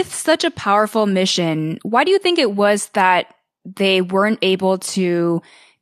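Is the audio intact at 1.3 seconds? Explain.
Yes, the speech is intact at 1.3 seconds, with no audible fault at that moment.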